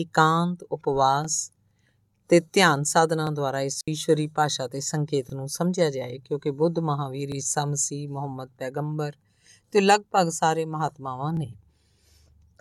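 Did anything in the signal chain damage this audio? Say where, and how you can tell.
Yes. The first fault is overlapping chunks, which sits at the buffer or block-processing stage. A short stutter-click occurs at 1.25, 3.27, 5.30, 7.32, 9.35 and 11.37 s. Each lasts 25 ms. The events fall almost exactly 2 s apart, which points to the audio being handled in 2-second blocks. Each new block starts 25 ms before the previous one ends. That overlap is played twice at every join, so the sound jumps back briefly and repeats.

The second fault is a digital wireless dropout, on the radio link between transmitter and receiver. From 3.81 to 3.88 s the signal falls to near silence for about 68 ms. The edges fade very quickly. No burst of hiss or static comes before or after the gap. That clean hole is typical of a digital receiver that has lost too much data. It mutes instead of passing corrupted audio, then resumes once the link recovers.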